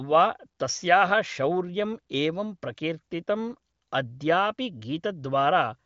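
Nothing goes wrong anywhere in this speech, which comes through the AMR wideband (HD Voice) codec at 23.05 kbit/s with the usual ceiling of about 7.5 kHz, leaving nothing to point out.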